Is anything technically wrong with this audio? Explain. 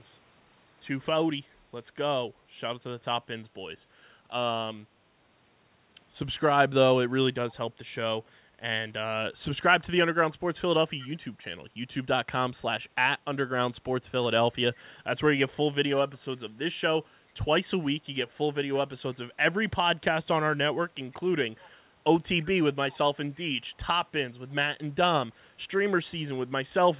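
Yes. Brief, faint repeats of the speech surface at 1.5–1.55, 11.02–11.12, 14.74–14.8, 15.96–16.18, 21.12–21.16, 21.59–21.7 and 22.92–22.97 s, trailing the original by 328 ms and roughly 25 to 40 dB quieter. This is an echo leak, likely from a far-end loudspeaker whose echo canceller let scraps of its microphone pickup return.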